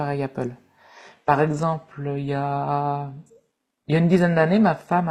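At 0.98 s the speech steps abruptly down to an adaptive stream at a lower bitrate and stays there: nothing above 12.3 kHz remains and codec artefacts thicken, which fits a switch to 16 kbit/s HE-AAC. Unlike a dropout, no gap occurs.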